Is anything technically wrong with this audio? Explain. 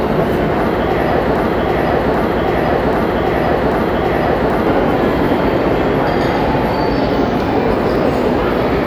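Yes. From 1.36 s to 4.67 s there is a broken-record loop: a 0.79 s fragment of the sound repeats exactly, back to back, four times. The likely cause is a stalled player or stream resending its last buffered piece, so the audio for that span is lost.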